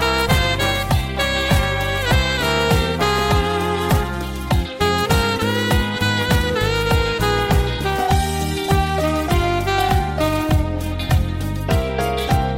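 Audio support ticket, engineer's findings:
No faults found on listening; nothing to report in the audio for this ticket.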